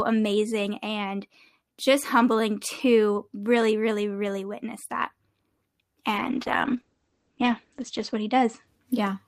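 From 6.16 to 8.73 s, a call bitrate drop forces coarser encoding, which fits a fall from 32 to 11 kbps; the speech turns rough and muffled, its bandwidth narrowed from 20 kHz to 8 kHz.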